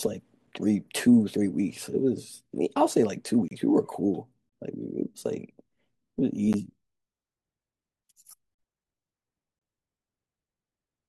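The speech breaks with gaps between stream segments at 0.47 s (about 5 ms), 3.48 to 3.51 s (31 ms), 4.49 to 4.52 s (30 ms), 6.53 s (12 ms), 8.55 to 8.59 s (41 ms) and 9.59 to 9.61 s (25 ms). Each is a short silent hole with hard edges. The spacing fits one-second segments. Their time stamps leave small gaps, and the player fills each with silence. Nothing is lost. The sound just stops briefly, then resumes.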